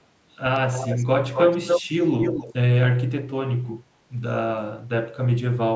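Echo leak at 0.73–1.05 s, 1.34–1.82 s and 2.21–2.54 s in this speech: a copy of the voice trails it by 265 ms, faint at first, then about as loud as the speech, then slightly quieter. This is likely loudspeaker pickup that an echo canceller failed to remove.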